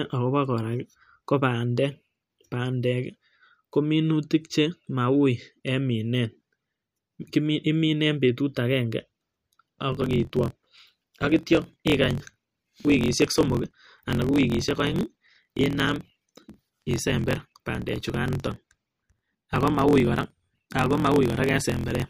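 From 9.9 s to the end, the speech shows a block size mismatch (truncated). One stage hands over longer blocks than the next reads, so the tail of each block is dropped. The result is a steady buzz at about 43.1 Hz, which fits 1024-sample reads, and the speech hurries along about 1.12 times faster with its timbre unchanged. A waveform shows discontinuities at evenly spaced block edges, and a spectrogram shows vertical striping repeating at that rate.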